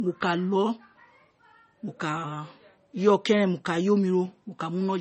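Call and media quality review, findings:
Low-bitrate audio saved at a high bitrate, throughout. Speech band empty above 8.3 kHz, with coding artefacts of the first encode. Likely an MP3 at around 32 kbit/s re-encoded near 256 kbit/s. The second pass keeps the first encode's losses and cannot restore the removed content.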